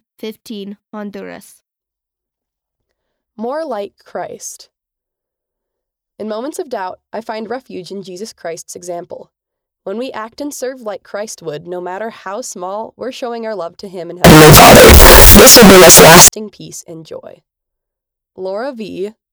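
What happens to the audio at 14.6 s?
At 14.6 s the speech falls inside a burst of very loud, harsh distortion running from 14.24 to 16.28 s, in which soft passages come out as loud as strong ones. The likely cause is signed and unsigned mixed up in 16-bit samples: reading one format as the other flips the top bit, so every zero crossing turns into a jump across the whole range.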